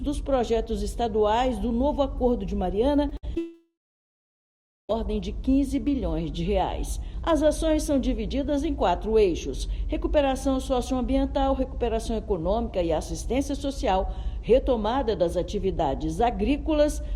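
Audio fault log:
3.09–3.13 s and 3.35–3.38 s, short concealed packet loss: In each spot about 20 ms of audio failed to reach the decoder in time, and the receiver filled the hole by extending the preceding sound for roughly 15 ms at the first and 10 ms at the second before blending back into the real signal. Each one comes across as a brief smear or wobble in the sound.
3.17–3.25 s, burst of packet loss: Several consecutive packets, about 60 ms of audio in total, were lost or arrived too late to play. The receiver bridged roughly 58 ms of that by carrying the last sound forward and turning it down as the gap went on, so it holds and fades instead of stopping abruptly. When playback resumes, it picks up further along, and the stretch in between is absent.
3.38–4.91 s, long network dropout: For about 1.5 s the audio stops being itself. The last sound is drawn out and fades, and then roughly 1.17 s of plain silence follows before the signal returns further along, with about 1.52 s of material gone. 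This pattern is likely a long network dropout in which nothing arrived for the whole stretch. The receiver's continuation gave out long before the data came back, so the fill decays and leaves silence.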